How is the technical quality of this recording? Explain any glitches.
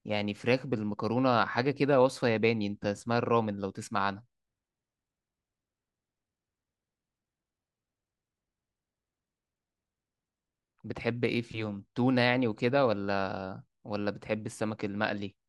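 The technical quality holds up well, and there are no glitches to explain.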